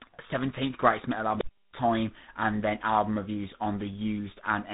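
Speech here has passed through tandem speech coding, GSM full rate, then G.711, then G.726 at 32 kbit/s, so it sounds rough, muffled and warbly, with nothing above 3.8 kHz. At 1.35 s, just after "greatest metal", an unstable filter runs away: a tone around 5 kHz swells to clipping within about 62 ms, then cuts to silence for about 325 ms until 1.73 s.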